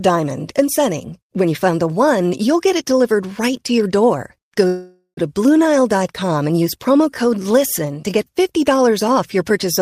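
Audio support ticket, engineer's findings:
Call audio freeze, 4.67–5.19 s. Last sound stretched into a fading buzz or hiss, ending in about 80 ms of silence. Likely jitter buffer underrun from delayed packets. Unlike packet loss, no audio is missing. Speech resumes where it stopped, running about 0.5 s late afterward.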